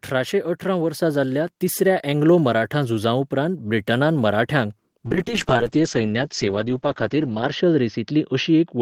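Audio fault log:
1.02 s: microphone volume stepped up. The speech and the background noise jump together by about 4 dB in a single step, as the call software raised the microphone's input gain at once rather than ramping it. The level stays higher afterwards.
5.06 s to end: call bitrate drop. The speech turns rough and watery, and the top end disappears as the audio bandwidth narrows from 20 kHz to 8 kHz. The encoder was coding far more coarsely, which fits a fall from 32 to 8 kbps. The worst stretch lasts 2.51 s.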